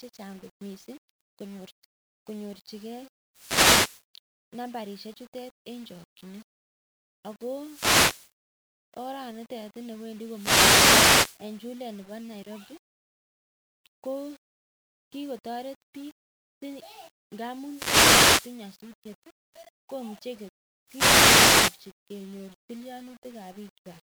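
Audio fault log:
throughout, low bit depth without dither: likely rounded to a coarse scale, fitting about 7 bits, so the error tracks the speech as grainy grit roughly 35 dB down.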